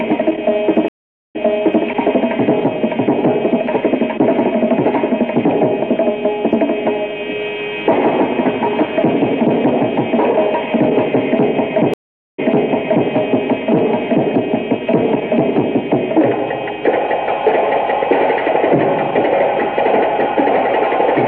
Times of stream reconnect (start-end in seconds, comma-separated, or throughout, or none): 0.88-1.86, 11.94-13.08